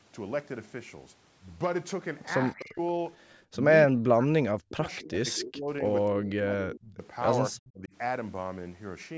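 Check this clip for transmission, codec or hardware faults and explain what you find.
Two call-path faults recur through the clip.

Speech suppressed in double talk, at 2.55–2.8, 3.86–5.84, 6.05–7.02 and 7.51–7.93 s: the speech dips by about 25 to 40 dB, likely because the echo canceller mistook overlapping talk for echo. These are drops in the main voice itself, not an added copy.

Echo leak, at 2.59–2.65, 5.36–5.53 and 7.65–7.71 s: short delayed repeats arrive 247 ms late, about 15 to 30 dB below the speech, likely residual echo that got past the canceller. This is a second, later copy, not a loss of level.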